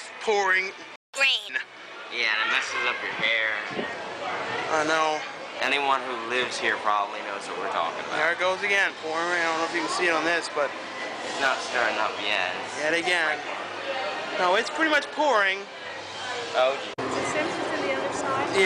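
At 0.96 s the sound cuts out. Silence holds for about 180 ms, until 1.14 s. Then it resumes from where it stopped. This is a playback stall. The gap is short but clearly audible as a hole in the flow. The likely cause is a player that ran out of buffered data or had its audio thread blocked. Nothing plays while it recovers.

From 1.14 s to 1.49 s comes catch-up at higher speed. The player works through its backlog at 1.5 times normal speed. It does this by resampling, so pitch rises too, by roughly seven semitones. The sound briefly turns quick and chipmunk-like. After about a third of a second it drops back to normal speed and pitch. That short burst wins back the time lost in the stall.

From 3.22 s to 5.58 s there is a Bluetooth SBC bit pool drop. The treble goes dull. A gritty, grainy noise rides on top of the sound. The encoder had fewer bits per frame, so the highest sub-bands got little or nothing. 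The remaining bands were quantised coarsely. The change fits the bit pool halving from 28 to 14, near 108 kbps. After about 2.4 s the clarity returns.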